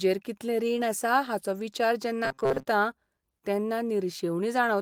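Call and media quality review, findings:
Robotic sound from repeated short buffers, 2.25–2.65 s: rigid metallic buzz near 134 Hz. Likely receive-side buffer underrun, with a ~7.5 ms chunk looping over most of that stretch.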